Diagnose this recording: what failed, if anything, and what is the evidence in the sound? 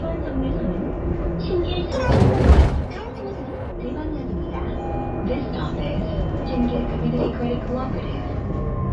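From 1.92 to 3.72 s the sound jumps up in pitch and rushes forward, then drops back to normal. That is a wrong sample rate at the playback stage: the samples were clocked out faster than they were captured, with no rate conversion. Speed rises by a factor of 1.5 and pitch by about 7 semitones, a fifth, which fits 16 kHz material played at 24 kHz. Time and pitch scale together because nothing separates them.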